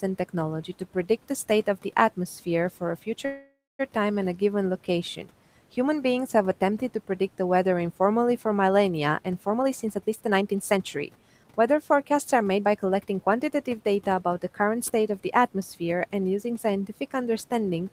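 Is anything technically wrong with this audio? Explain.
Yes, there are two faults in this speech clip, against a background of room noise sitting about 23 dB below the speech.

From 3.25 to 3.81 s there is a call audio freeze. The sound is stretched into a fading buzz that ends in about 220 ms of silence. This is likely a jitter buffer running empty while packets were held up. Speech resumes where it stopped, so nothing is lost, but about 540 ms of delay is added.

From 9.49 to 13.11 s there is a jitter buffer speed-up. The speech runs at about 115% of normal rate with its pitch unchanged and sounds hurried. To shed the extra delay, the receiver repeatedly cut out pitch-period-length pieces, roughly half a second in total.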